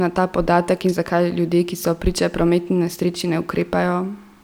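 No technical faults can be heard in this recording.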